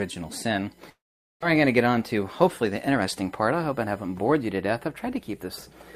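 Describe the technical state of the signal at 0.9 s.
At 0.9 s the sound breaks off in what is likely a long network dropout, running from 0.89 to 1.45 s. The gap is filled by a continuation of the last sound as a fading buzz that sinks into near silence. Audio returns at 1.45 s with about 0.4 s of material missing and the stream arriving roughly a tenth of a second later than before.

A USB whine is also present at this moment, lasting from 0.0 to 4.39 s. The bus's 1 ms frame timing leaks through power or ground as a fixed-pitch whine on a 1 kHz fundamental, strongest at its 2 kHz harmonic, about 40 dB below the signal.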